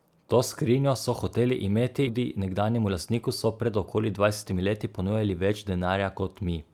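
At 2.07 to 2.09 s, right after "skrinjo so hoteli imeti", there is a skip ahead: around 0.7 s of speech was dropped while later audio was already queued, and playback jumps straight to it. The two sides are spliced with no gap, so the speech lurches forward.

From 2.17 to 5.87 s, a jitter buffer speed-up follows as the receiver drains its backlog. It repeatedly cuts short pitch-period segments, removing around 0.4 s in total. The speech runs at 110% speed at unchanged pitch and sounds noticeably hurried.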